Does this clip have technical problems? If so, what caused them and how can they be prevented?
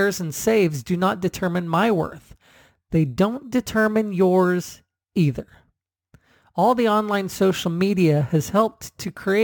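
Yes. Throughout, imaging from sample-and-hold upsampling adds a metallic fizz about 25 dB below the speech, spanning 11 to 22 kHz. Each sample from the 22 kHz source was simply repeated to reach 48 kHz. Unlike steady hiss, it tracks speech loudness. Prevent it with a proper interpolating resampler and low-pass filter.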